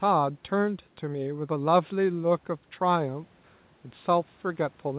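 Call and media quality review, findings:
No faults found in this speech clip. Nothing is audible above 4 kHz, which fits a narrowband G.711 mu-law call path, and faint room noise sits about 38 dB below the speech.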